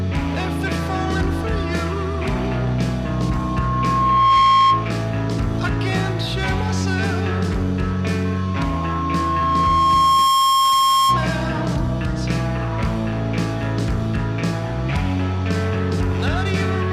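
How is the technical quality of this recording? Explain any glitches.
Two bursts of loudspeaker feedback squeal mar the recording, from 3.04 to 4.94 s and from 8.25 to 11.32 s. Each time, a microphone picks up its own loudspeaker and the 1.1 kHz loop gain passes one, so that single tone swells over about one and a half seconds, then about two, rising roughly 10 dB and then 5 dB above the sound. That steady build-up at one fixed pitch sets it apart from a constant hum or whistle.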